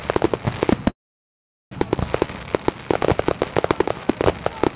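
A recording of everyday sounds, heard through a narrowband call path that leaves nothing above 4 kHz. At 0.89 s it cuts out: the last instant trails off briefly, then silence holds for about 0.78 s until 1.74 s, when the sound picks up exactly where it broke off. That is a call audio freeze, likely from packets held up in transit so the jitter buffer ran dry. Nothing is lost, but everything afterwards arrives about 0.82 s late.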